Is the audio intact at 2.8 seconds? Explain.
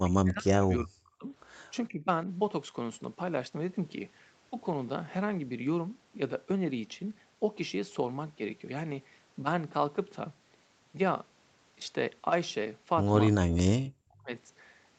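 Yes, at 2.8 s the speech is intact, with no dropout, glitch or distortion.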